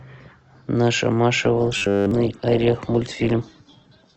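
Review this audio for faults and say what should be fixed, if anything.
From 1.45 s to the end of the clip, the adaptive stream drops to a lower bitrate: codec artefacts rise suddenly with no gap, which fits a switch from about 64 to 12 kbit/s Opus. Unlike a dropout, nothing goes missing; only quality falls. Give the stream more bandwidth headroom or buffering so it doesn't step down.

From 1.77 to 2.11 s, the speech becomes a rigid metallic buzz at 100 Hz that still roughly follows the syllables. That is robotic sound from repeated short buffers, likely the last 10 ms being replayed across the whole stretch while real audio is skipped. Unlike the bitrate drop, this imposes a fixed pitch. A larger jitter buffer or better loss concealment would prevent it.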